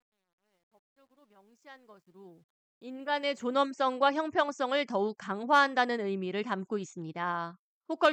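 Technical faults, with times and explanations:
0.0–3.64 s, truncation distortion on a fade: The fade-in starts gritty. Samples are cut to coarse steps without dither, which fits about 11 bits. From 0.0 to 1.97 s the quiet start is at its grittiest.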